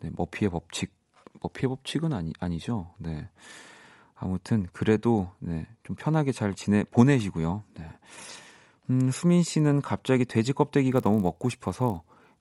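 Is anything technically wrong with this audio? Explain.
Yes. From 10.9 s to the end at 12.40 s, the resampler restarted on every block. Each 20 ms block was converted separately, consistent with 24 kHz to 48 kHz, so its edges carry errors. That gives a 50 Hz buzz that, unlike mains hum, stops whenever the speech pauses.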